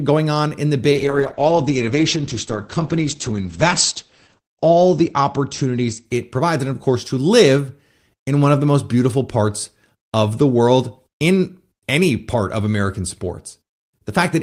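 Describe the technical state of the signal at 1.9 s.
At 1.9 s you're inside a call bitrate drop that runs from about 0.93 s to 7.49 s. The bandwidth estimate fell, so the encoder was squeezed down to a rate that sounds like roughly 9 kbps, down from something near 32 kbps. It codes the speech much more coarsely and cuts the top end from around 20 kHz to about 8 kHz. It sits at its worst for roughly 3.2 s, so things sound muffled, rough and watery until the rate recovers.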